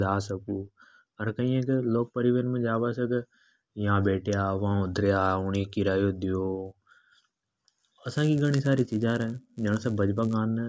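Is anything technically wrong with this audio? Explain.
Yes. From 6.66 s to 10.35 s the speech carries a resampler restarted on every block fault. The conversion, which fits a change from 44.1 kHz down to 16 kHz, was run separately on each 10 ms block, so every block edge was computed without its true neighbouring samples and picks up a small error. Those errors repeat at 100 per second, heard as a steady buzz that rides on the speech and disappears in pauses. That signal dependence separates it from mains hum, and the strict regularity separates it from random dropout clicks.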